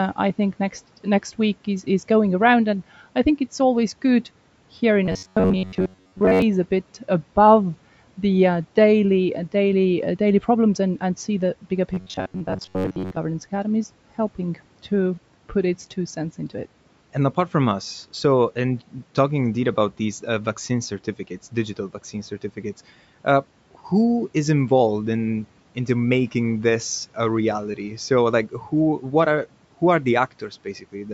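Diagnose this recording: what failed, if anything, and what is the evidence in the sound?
Two stretches turn into a rigid, metallic buzz at 93.8 Hz: 5.06 to 6.42 s, right after "always good here in" and before "a bit above the", and 11.94 to 13.18 s, after "and see the bigger". That's robotic sound from repeated short buffers, likely a driver or buffer-stage starvation where roughly 10.7 ms chunks get looped, most of it repeats, with the real audio skipped.

Right at the end, 30.4 to 31.07 s after "what are who are", the speech gets cut by the noise suppressor in the call processing. Bits of speech drop by up to about 11 dB, roughly 150 ms in all, so they sound swallowed, treated as background noise.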